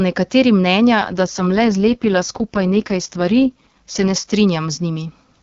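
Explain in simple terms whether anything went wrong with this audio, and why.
An AMR rate drop happened from about 1.0 to 4.3 s, just after "nekateri mnenja": the network squeezed the call into fewer bits, making the speech rougher and more synthetic.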